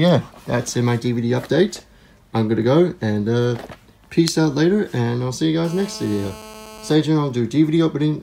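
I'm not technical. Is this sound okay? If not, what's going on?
No. A GSM phone buzz runs from 5.64 to 6.94 seconds: a harsh, raspy drone. An older 2G mobile phone on a call nearby sends radio pulses 217 times a second, and the audio equipment picks them up and turns them into this steady buzz.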